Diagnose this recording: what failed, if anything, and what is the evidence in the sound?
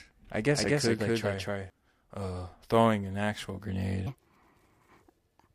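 A doubled audio track runs from the start to 1.7 s: the speech is heard twice, with an equally loud copy about a fifth of a second behind. The likely cause is a second, slower capture path or an edit stacking two copies. A spectrogram shows every full-band feature repeated without smear, ending abruptly at 1.7 s.

From 4.07 s to the end is a section at the wrong speed. It plays 1.46 times fast, raising pitch by about seven semitones and hurrying the speech, likely from an edit or playback stage using the wrong clock. On a spectrogram, harmonics jump upward and syllables compress in time.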